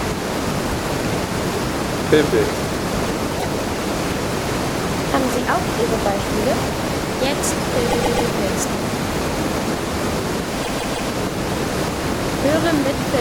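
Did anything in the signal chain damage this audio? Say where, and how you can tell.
Yes. The sound stutters at 3.38 to 3.46 s (a 78 ms block heard twice), 7.88 to 8.27 s and 10.62 to 11.09 s (131 ms and 157 ms blocks each replayed three extra times). These are repeated frames: short runs of compressed frames were stored or sent again, so the decoder plays them again.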